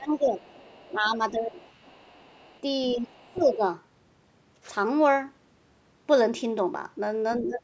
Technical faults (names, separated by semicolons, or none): speech suppressed in double talk; other side's voice leaking through